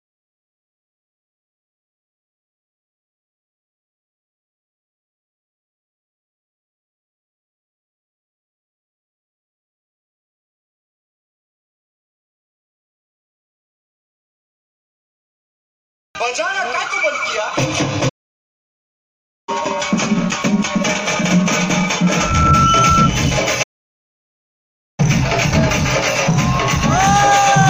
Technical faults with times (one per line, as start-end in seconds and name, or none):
18.09-19.49 playback stall
22.02-23.10 loudspeaker feedback squeal
23.62-25.00 playback stall